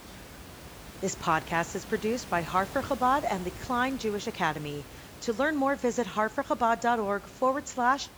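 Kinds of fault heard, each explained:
No faults are present in this speech clip. There is some background room noise about 17 dB below the speech, which comes from the recording space itself rather than the system.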